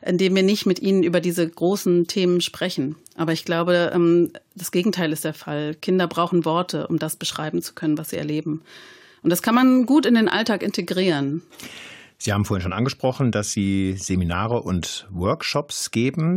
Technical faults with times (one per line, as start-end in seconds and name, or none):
none